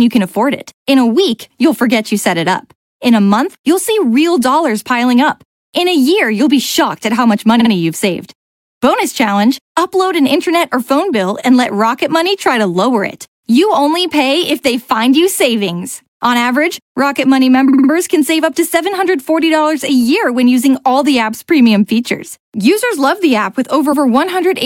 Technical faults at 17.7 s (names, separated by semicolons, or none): repeated frames